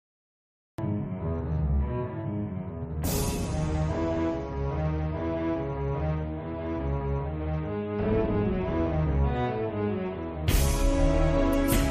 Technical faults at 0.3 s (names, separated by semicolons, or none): cut-off start